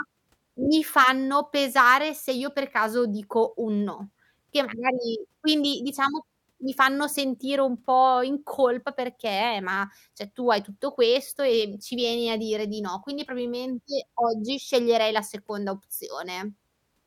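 A short burst of crackle breaks into the speech between 0.98 and 1.10 s, a gritty edge on the loudest moments of that stretch rather than a sustained fuzz. This is hard clipping: for about a tenth of a second the signal runs roughly 2 dB past what a stage in the chain can pass, so its peaks are sheared flat, and those squared-off tops throw harmonics high into the spectrum, which the ear catches as crackle.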